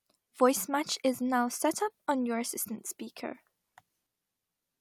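Speech recording, no technical faults detected anywhere in the clip.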